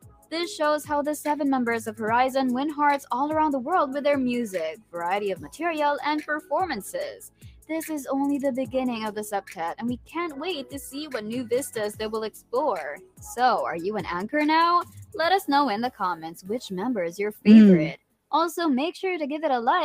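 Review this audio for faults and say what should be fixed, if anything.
A speech-tuned noise suppressor is running across the whole clip on material it wasn't built for, treating steady tones and tails as noise. Level pumps by roughly 10 dB as it clamps down, so held sound sinks while attacks get through.

On top of that, there are stretches of sound cut by the noise suppressor where it dips hard: 0.0–0.33 s, 4.76–5.56 s, 7.22–7.7 s, 12.34–13.23 s and 17.33–18.32 s (each about 17–18 dB down), plus 9.49–10.74 s (about 9 dB) and 14.84–15.15 s (about 13 dB).

The fix is to bypass the suppressor, or switch it to a music mode, for anything that isn't speech.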